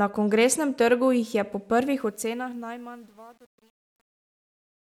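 Right after "trgu jih je po", at 1.99 s, the speech starts fading out. The fade carries truncation distortion, though. The gain stage is rounding to too coarse a step with no dither, which fits something keeping only about 9 bits. From 2.54 s to the end at 4.97 s, the quiet tail turns gritty and steppy instead of trailing off cleanly.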